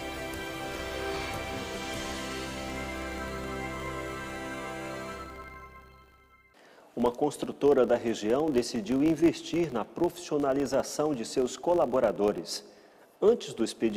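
A steady buzz at 50 Hz runs through the whole clip, its loudness rising and falling with the level of the sound. It comes from a filter restarted on every block: its memory is cleared fifty times a second, so each block opens with a small transient.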